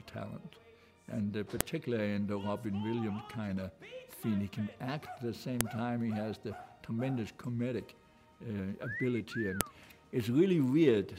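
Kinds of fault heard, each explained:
File header played as audio: sharp, loud clicks at 1.61, 5.61 and 9.61 s, one every 4.0 s, where header bytes from each joined piece play as samples. The waveform shows a brief spike at each join; the spectrogram shows a thin vertical broadband line.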